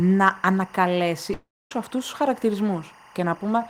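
Throughout the speech, timecode bleed sits well below the voice, roughly 25 dB down: a chirping warble flipping between about 1 kHz and 2 kHz, patterned at 24 frames per second. That rapid two-pitch alternation distinguishes it from a single steady whine or mains hum.

From 1.33 s to 1.72 s, the speech smears into a fading buzz that sinks to near-silence for about a quarter second. Speech then resumes at "αυτούς τους" with roughly 380 ms gone, likely a long network dropout. The audible fade-out, rather than a hard cut, sets it apart from a simple mute.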